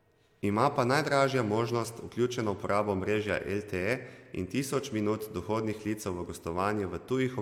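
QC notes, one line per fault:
Nothing stood out on listening.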